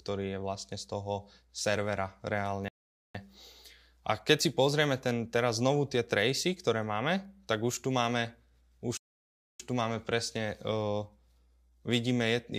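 At 2.68 s the speech cuts to silence for about 0.46 s, then resumes at 3.15 s. At 8.97 s it stops again, this time for about 0.63 s, until 9.60 s. Both gaps are likely playback stalls, where the player ran short of data.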